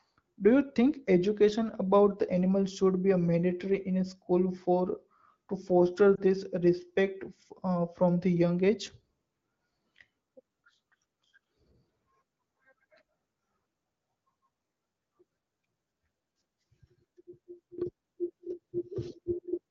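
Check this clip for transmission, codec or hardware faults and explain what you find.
One transmission fault is audible: lost AMR speech frames, around 6.15 to 6.21 s. The speech passes through the AMR wideband (HD Voice) codec, and its clean, light coding suggests one of the higher-rate modes.

At 6.15 to 6.21 s there is a short dip. That fits a single lost 20 ms frame. Radio errors corrupted the frame so it failed its checksum, and the AMR decoder filled the slot by repeating the last good pitch and vocal tract settings at reduced gain. The concealed stretch is smeared and quieter rather than missing, then the voice returns a little weak for an instant. A hard dropout would leave true silence or a click, and what is heard here is an attenuated continuation of the previous sound.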